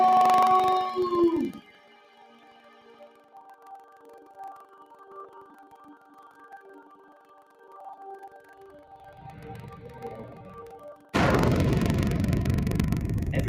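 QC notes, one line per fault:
Throughout: buffer tearing. The software writing the playback ring buffer and the hardware reading it have drifted until they cross inside every period, so a small slice of each period replays audio from roughly 150 ms earlier, with hard joins on both sides. This gives a continuous robotic rattle at 23.4 Hz, which fits a 2048-sample buffer and is heard only while sound is playing.
Throughout: noise suppressor applied to music or sounds. A speech-oriented noise suppressor was left active and treats steady tones, ambience and reverb tails as noise, pulling them down by as much as about 15 dB. Attacks pass while sustained parts sink, so the sound pumps and thins.
1.61–4.36 s, 4.64–5.06 s, 5.49–6.47 s, 6.85–7.71 s, 8.36–8.6 s, 10.96–11.13 s: sound cut by the noise suppressor. In each span the suppressor mistook sustained or decaying material for noise and attenuated it harder than elsewhere, by about 6 to 8 dB at its deepest. 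Held and fading sounds drop away or end early, while sudden onsets mostly survive.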